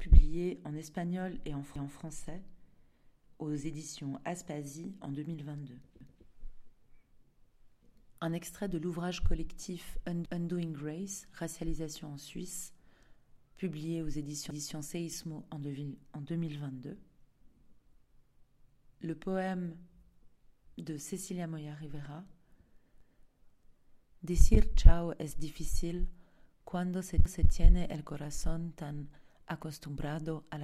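Overlapping chunks repeat a 250 ms stretch of audio at 1.76, 6.01, 10.26, 14.51, 18.76, 23.01 and 27.26 s. Each 4 s chunk begins a quarter-second before the previous one ends, so every join replays that slice as a regular stutter.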